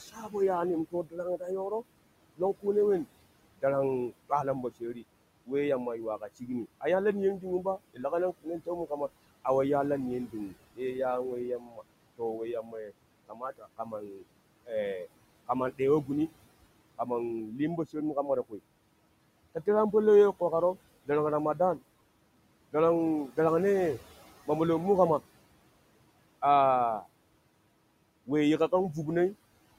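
A speech recording carries noise suppressor artifacts throughout. The background is pulled down by about 21 dB between phrases and swells back under the talking. Speech cut by the noise suppressor occurs from 0.12 to 1.42 s, 2.37 to 18.6 s, and 19.55 to 23.38 s. Quiet consonants and word endings get treated as noise and sink by about 19 to 21 dB, totalling roughly 3 s in the middle stretch and under half a second in each of the others.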